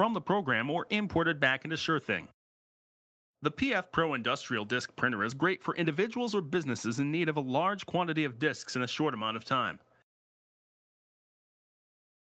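No technical faults can be heard in this audio. The call path's band limit is audible, with nothing above about 8 kHz, along with the usual coding texture expected from the Opus call codec.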